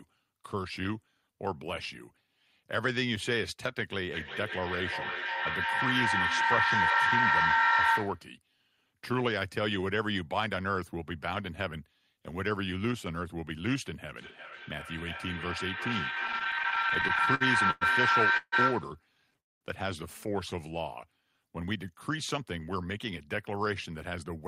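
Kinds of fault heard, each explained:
Feedback echo between two devices: Two devices sharing a room and a call pass the sound back and forth, so it returns about every 0.4 s, from 4.13 to 8.34 s and 14.17 to 19.05 s. Repeats reach about 6 dB above the original and pile up, unlike reverb, which simply decays.
Repeated stalls (stutter): From 16.27 to 17.83 s, late packets kept draining the jitter buffer, causing many short interruptions bridged by continued sound, the longest about 0.11 s. They cover roughly a fifth of that stretch. Nothing is lost, but the audio drags in small jerks, unlike one long freeze.
Call audio freeze: At 18.37 s the sound holds for 0.15 s, partly bridged and partly silent, and at 19.40 s it stops for 0.21 s, almost entirely silent. Both then resume exactly where they left off, likely because delayed packets emptied the jitter buffer. Each is a single pause, not a repeated stutter.
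Jitter buffer speed-up: From 21.60 to 24.37 s, the receiver trims small pitch-period slices to shed a backlog of about a fifth of a second. The audio runs about 8% faster yet keeps its pitch, which separates it from a sped-up playback rate, where pitch would rise.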